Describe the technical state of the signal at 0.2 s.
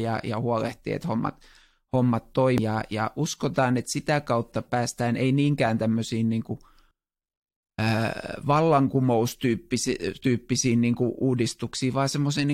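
At 0.2 s the speech signal is intact, with no audible technical fault at that moment.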